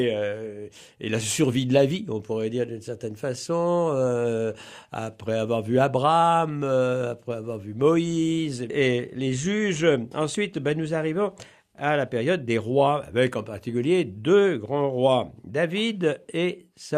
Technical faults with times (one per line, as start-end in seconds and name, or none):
none